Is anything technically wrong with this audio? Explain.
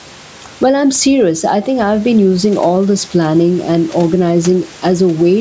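Yes, there are two faults in this speech.

Gain pumping runs throughout: the level swings by around 10 dB, squashing loud and soft parts closer together, likely from excessive input gain driving a fast limiter.

A sudden gain jump at 1.67 s drops speech and background together by about 4 dB until the end, likely a digital gain change applied without any ramp.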